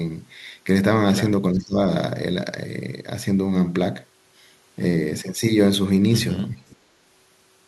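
At 1.53 to 1.77 s the speech dips sharply, by around 20 dB, and at 6.55 to 6.79 s it drops again, deeper, by roughly 30 dB. This is likely speech suppressed in double talk: an echo canceller, unable to separate the talker from loudspeaker echo, attenuated both.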